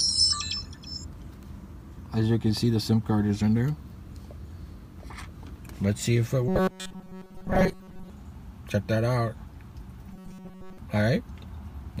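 From 6.48 to 8.10 s and again from 10.13 to 10.78 s, the sound becomes a rigid metallic buzz locked at 188 Hz. This is robotic sound from repeated short buffers. Audio likely arrived too seldom, so a 5.3 ms slice was looped, replacing most of the first stretch and all of the second.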